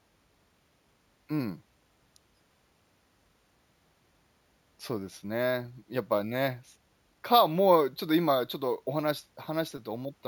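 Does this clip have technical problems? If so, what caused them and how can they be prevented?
Yes, there's imaging from sample-and-hold upsampling across the whole speech clip: a metallic fizz between 8 and 16 kHz, about 20 dB below the speech, tracking its level. That fits 16 kHz material stretched to 48 kHz by repeating samples unfiltered. Using a proper low-pass interpolating resampler would prevent it.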